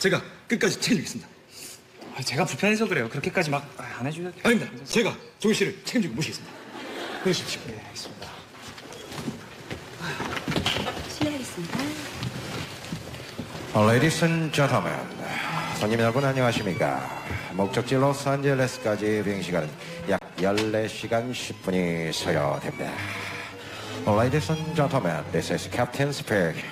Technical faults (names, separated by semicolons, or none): underrun with held sample